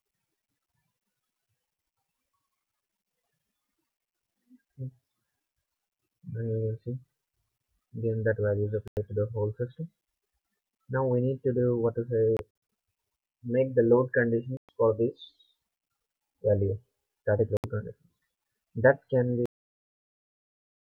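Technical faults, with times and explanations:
8.88 to 8.97 s, 12.37 to 12.39 s, 14.57 to 14.69 s and 17.57 to 17.64 s, Bluetooth dropout: likely wireless packets arriving too late to be played and then discarded, each gap matching a few lost packets. The output goes silent for about 93, 139, 116 and 70 ms, and the sound picks up further along as though it had kept running. At 12.37 s the 139 ms is broken into short holes scattered over 325 ms, the longest 46 ms.
19.46 s to the end, cut-off end: the final stretch of audio was never delivered or played out, so the sound stops abruptly in the middle of itself, with no natural decay or tail. Silence follows for the last 1.5 s of the clip.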